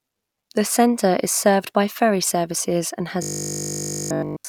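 From 3.23 s, right after "by ferry services and", the speech turns into a rigid, metallic buzz that holds a fixed 50 Hz pitch until the clip ends at 4.49 s, with the words only loosely traceable underneath. This is robotic sound from repeated short buffers, likely caused by new audio arriving too seldom: the playback loops the last chunk of about 20 ms to fill the gaps, essentially all of that stretch is repetition, and the looping imposes its own 50 Hz tone.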